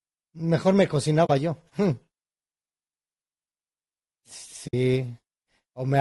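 Speech with a rough, grainy texture throughout: noise fills the gaps between pitch harmonics and the top band sounds thin and synthetic. The likely cause is low-delay AAC compression (AAC-ELD), whose short frames resolve harmonics poorly, and the damage is plainly audible, which fits a bitrate around 32 kbps. Unlike the smeared, watery swirl of a long-frame codec starved of bits, this is a granular roughness that stays tied to the harmonic structure. Two AAC frame losses with muting also occur, at 1.25 to 1.30 s and at 4.67 to 4.74 s. The sound fades out and back in over brief soft-edged holes of about 40 and 60 ms, consistent with two and three lost frames whose spectrum the decoder zeroed. The overlapping windows taper both edges, unlike a hard sample dropout.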